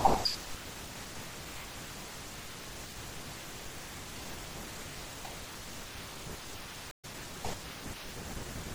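Throughout the speech there is plainly audible swirly, watery smearing, with chirpy s sounds, likely MP3 compression at a low bitrate, which fits roughly 64 kbps. The encoder starves weak frequency lines, so they flicker between frames, unlike a simple low-pass filter that would only dull the sound.

From 6.91 to 7.05 s a stream reconnect breaks the audio: about 0.12 s of silence, then it picks up roughly 150 ms further on, with the missing moment gone. That skip ahead separates it from a plain dropout, where the sound resumes from the same point.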